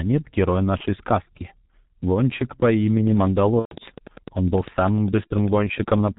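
The whole clip runs through a G.723.1 codec and the damage is heavy. Nothing comes through above 4 kHz, so the speech is muffled and hoarse and the consonants smear together. The slow-updating voice model and coarse 30 ms framing fit the 6.3 kbit/s mode of that codec.

At 0.77 to 0.86 s there's VoIP packet loss concealed by the speech codec. The gap fits one lost 30 ms frame. The decoder fills it by extending the last pitch and filter at falling gain, which gives a short buzzy or noisy smear. The voice then stays a bit off for the rest of that window while the codec's frame-to-frame state recovers.

From 2.97 s to 6.09 s a train of clicks sits over everything, pauses included. It's about ten near-identical pops a second on a regular beat, around thirty in all, peaking a few dB above the speech. The likely source is interference from nearby equipment or a faulty connection or power supply, injecting the same pulse over and over.

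Inside that stretch, at 3.59 to 3.76 s, the packet loss concealment returns, and this time it's the long one. It fits four lost frames, 120 ms. The concealment stretches into a fading buzz or coloured noise, and G.723.1 goes silent from the third lost frame in a row. The speech then comes back weak or distorted for a while.

A last short dropout at 5.28 to 5.32 s fits another single 30 ms lost frame, with the same brief extrapolated smear, still under the clicks.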